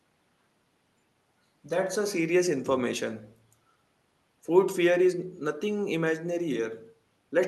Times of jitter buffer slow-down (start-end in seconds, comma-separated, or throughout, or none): none